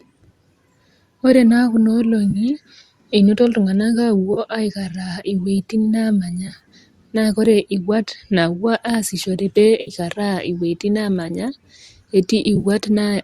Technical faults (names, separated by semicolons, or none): AAC frame loss with concealment